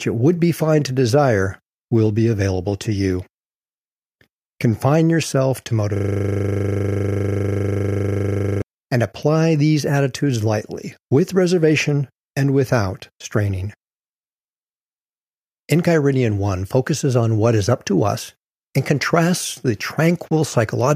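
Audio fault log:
5.97–8.62 s, system hang loop: the speech halts and a single 40 ms slice repeats exactly, some 66 times, fusing into a steady 25 Hz buzz because the playback hardware kept cycling one ring buffer while the system froze. Mains hum holds a constant tone under the speech, and a dropout or stutter leaves gaps or moving fragments. This buzz replaces the speech entirely, every cycle is identical, and normal sound resumes abruptly once the hang clears.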